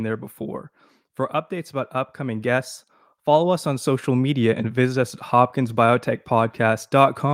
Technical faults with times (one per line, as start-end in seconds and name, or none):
1.71-4.35 automatic gain rising